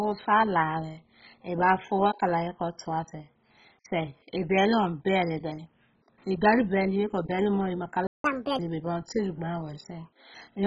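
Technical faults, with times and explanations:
Throughout: MP2 compression, likely at a very low bitrate; dull and gurgling, with granular flicker rather than the smeary warble of transform codecs.
8.07–8.24 s: playback stall; the speech cuts to silence for about 170 ms, then resumes where it stopped, unlike a dropout that skips material.
8.24–8.59 s: catch-up at higher speed; the backlog plays at 1.5 times speed, pitch rising about seven semitones, then settles, unlike a steady pitch shift.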